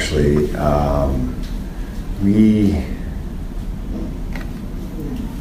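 Nothing goes wrong anywhere in the clip, so there's nothing here to flag.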